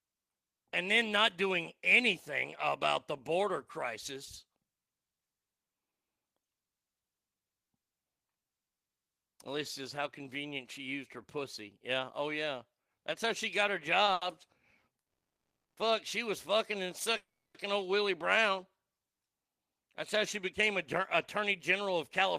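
At 14.05 s and again from 14.13 to 14.24 s, a late packet left the jitter buffer empty, causing two short stalls. The receiver held the last sound for 20 ms and then 80 ms before resuming at the same point, so the speech briefly drags with a faint buzz.

From 14.99 to 15.79 s, and again from 17.17 to 17.58 s, a call audio freeze occurs, likely from packets held up in transit draining the buffer. The first is 770 ms of silence. In the second, a brief buzzy continuation fades into about 300 ms of silence. Speech resumes where it left off each time.

From 19.21 to 22.21 s, a jitter buffer speed-up follows. The buffer had built up excess delay, and the receiver trimmed pitch-period slices totalling about a tenth of a second. Speech runs at 104% speed with pitch unchanged.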